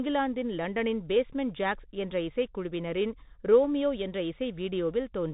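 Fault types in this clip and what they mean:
Bluetooth CVSD headset codec: the speech passes through the narrowband headset link, which codes each sample as a single up-or-down bit with an adapting step. Nothing gets through above about 3.8 kHz, so it sounds boxed-in. The codec damage is plainly audible: gritty hiss underneath, scratchy s sounds, and roughness on louder bright moments.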